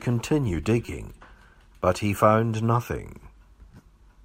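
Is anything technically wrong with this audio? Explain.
Yes. A corrupt frame decoded at 0.85 to 0.88 s: damaged bits in a few compressed frames misplace energy, producing a brief, quiet chirp, squeak, blip or burst of noise (peaking around -30 dBFS), visible as a short, misplaced spectral smear.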